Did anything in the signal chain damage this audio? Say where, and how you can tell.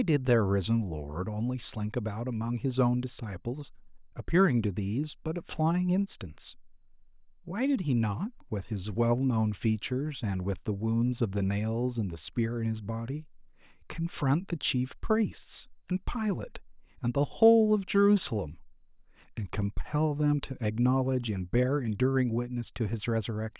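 No, nothing in the recording stood out on listening as damage from any stage of the signal chain.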